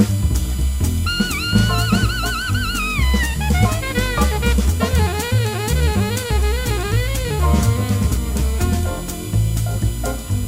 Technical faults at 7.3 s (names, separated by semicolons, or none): USB whine